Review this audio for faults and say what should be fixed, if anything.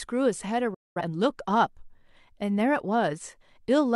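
There is a digital broadcast dropout in the speech from 0.74 to 1.02 s. The sound fades to silence over about 8 ms, stays muted, then returns partway through the programme. About 213 ms of audio is lost. That fits roughly five frames that failed to arrive or failed their checksum, so the receiver muted until good frames resumed. To prevent it, improve reception margin or add stronger error protection so frames survive intact.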